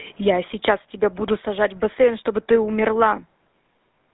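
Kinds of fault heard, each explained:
GSM full-rate codec: The speech runs through the original GSM mobile codec the whole way through, which models the throat and mouth as a filter and drives it with a sparse, regularly spaced pulse train. That thin excitation gives the plainly audible buzzy, gravelly roughness here, consistent with a 13 kbps full-rate stream. The band is squeezed to roughly 200 Hz to 3.7 kHz, so there's no low body and no air or sibilance up top.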